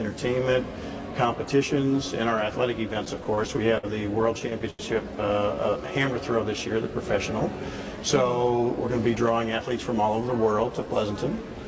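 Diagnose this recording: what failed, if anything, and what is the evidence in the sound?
The network feeding the jitter buffer is the culprit here, showing up as repeated stalls (stutter). From 2.94 to 3.85 s there are eight little hitches, about 133 ms of filled time, the longest 56 ms. From 4.39 to 4.81 s there are four more, 118 ms filled, one stretching to 86 ms. Packets were arriving late, so the buffer kept running dry and the receiver stretched the last sound to cover each gap. Nothing is actually lost, but it drags.

Right after that comes a jitter buffer slow-down, from 5.39 to 5.88 s. The sound runs at about 90% speed with the pitch unchanged, because the receiver repeated pitch periods to add roughly 61 ms and rebuild its reserve. You'll hear it as drawn out.

Later there's a jitter buffer speed-up, from 7.97 to 9.17 s, running at about 108% with the pitch held steady. The buffer had overfilled, probably after delayed packets landed together, so it trimmed short pitch-period slices, around a tenth of a second in total. 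It sounds hurried. The band tops out at 8 kHz, which fits a G.722 call path.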